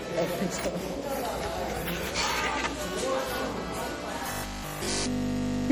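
From the start the sound has a swirly, smeared, hollow quality, with transients blurred and spectral gaps that seem deeper than a single 64 kbit/s MP3 encode would leave. That points to generation loss, likely from roughly seven successive MP3 passes, each re-quantising on a shifted frame grid so noise and holes accumulate. A single low-bitrate encode gives steadier, uniform dulling. Here the damage is compounded and unstable.

At 4.32 s, continuing to the end, the audio collapses into a rigid metallic buzz at 50 Hz, the robotic sound from repeated short buffers. The fixed pitch fits a 20 ms chunk replayed over and over, likely because fresh audio stopped arriving and essentially all of this stretch is repetition while the real signal is skipped. Unlike codec swirl, the buzz imposes a steady pitch of its own while only loosely tracking the underlying sound.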